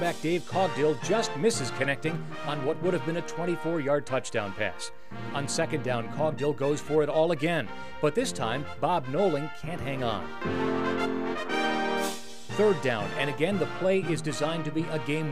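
No technical faults can be heard anywhere in this audio.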